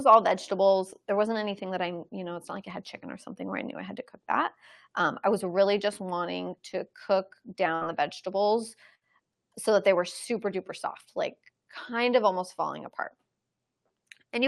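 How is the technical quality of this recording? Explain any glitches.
The recording has two short dropouts from a burst of packet loss. It came through a call path whose coding cuts the top end near 12 kHz. At 7.75 to 7.84 s, after "just wanting to cook", the receiver stretches the last sound for about 60 ms as it fades. Then it jumps ahead to "the vegetables", skipping about 60 ms. The same happens at 8.95 to 9.04 s, before "so that they were".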